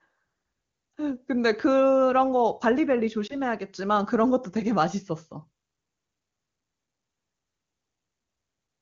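A brief dip or warble breaks the speech at 0.91 to 0.93 s and again at 3.27 to 3.34 s. These are lost AMR speech frames: a single damaged frame failed its check each time, and the AMR wideband decoder bridged it by repeating the previous pitch and vocal tract settings at lowered gain.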